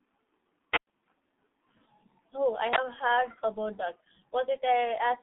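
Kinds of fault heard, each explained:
G.723.1 codec: muffled, hoarse speech with smeared consonants and nothing above 3.7 kHz, from a 6.3 kbit/s telephony codec coding 30 ms frames.
Wireless microphone squelch dropout: near 0.72 s hiss swells, then about 106 ms of near silence until 0.87 s, as fading radio signal trips the receiver's squelch.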